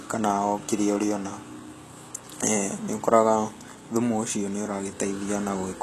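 Speech, and the HE-AAC compression damage runs the whole way through and is plainly audible. Nothing survives above about 12.3 kHz, and the treble below that has the synthetic sheen of spectral band replication: the top end is rebuilt by copying lower bands upward under a coarse envelope, so its harmonics don't line up with the real ones underneath. That leaves the s sounds gritty and a bit lispy. The sound fits a very low bitrate, around 16 kbps, likely from an HE-AAC encode.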